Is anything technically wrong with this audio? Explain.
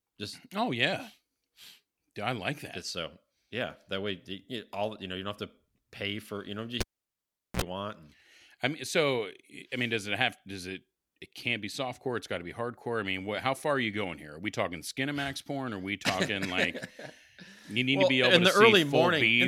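Yes, there's a cable pulled and plugged in, from 6.81 to 7.62 s, right after "pay for you know". A pop, about 0.76 s of near silence, then a 47 ms burst of 60 Hz mains buzz as the plug tip touches, and a second pop when the sound returns.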